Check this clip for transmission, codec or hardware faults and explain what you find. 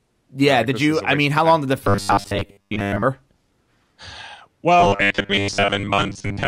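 Robotic sound from repeated short buffers appears twice in the speech, from 1.84 to 3.04 s and from 4.80 s to the end of the clip. A rigid, metallic buzz at 100 Hz sits on the voice while the syllables still roughly come through. The likely cause is audio arriving too seldom, so the playback loops a roughly 10 ms chunk for most of each stretch and skips the real signal, which stamps that fixed 100 Hz tone onto the sound.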